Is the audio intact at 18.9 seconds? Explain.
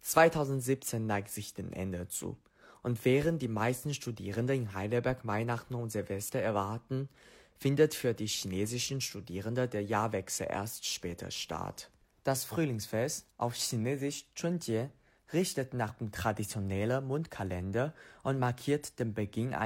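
Yes, the speech at 18.9 seconds comes through intact, with no dropout, click, distortion or other fault at that moment.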